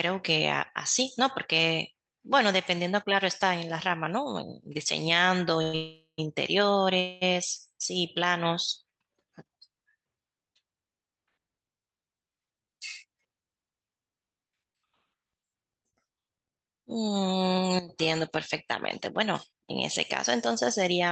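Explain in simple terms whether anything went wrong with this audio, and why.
Yes, several things went wrong, all typical of a call connection.

Call audio freeze: at 5.62 to 5.75 s, 5.75 to 6.20 s and 7.00 to 7.23 s the sound stalls and the last sound is stretched into a fading buzz, briefly dropping to silence in the longer middle stretch. Packets were likely delayed in transit, so the receiver ran out of audio and padded the wait. Nothing is lost, but the sound arrives later afterwards.

Jitter buffer speed-up: from 11.89 to 13.26 s the speech runs about 10% fast, and from 17.64 to 21.08 s about 3% fast, with the pitch unchanged. After the delays, the receiver trimmed tiny slices of speech, roughly a seventh and a tenth of a second in total, to catch up.

Short concealed packet loss: at 14.72 s and 15.90 s about 20 ms of audio never arrived. The receiver filled each hole by extending the preceding sound and blending back in, which can be heard as a brief smear or wobble where a short sound may vanish.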